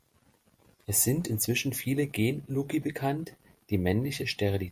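No technical faults are audible.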